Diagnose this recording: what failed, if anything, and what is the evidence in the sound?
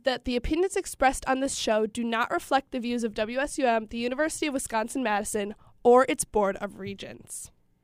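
Nothing failed: no stage from capture through playback leaves any audible mark on this speech recording.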